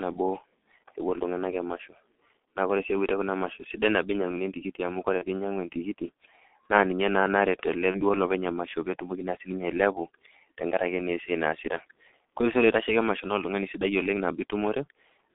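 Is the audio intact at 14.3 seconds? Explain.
No. At 14.3 seconds the speech sounds muffled and hoarse, with smeared consonants and no brightness above about 3.6 kHz. This G.723.1 codec damage runs through the whole clip: at 6.3 kbit/s its coarse 30 ms frames model the voice too slowly to keep detail.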